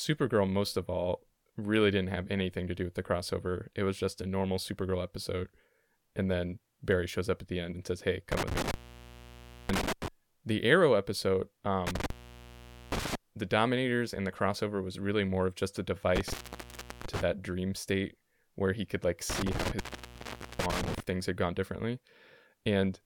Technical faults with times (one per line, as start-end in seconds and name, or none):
8.32-10.08 intermittent contact
11.87-13.15 intermittent contact
16.16-17.21 intermittent contact
19.30-21.00 intermittent contact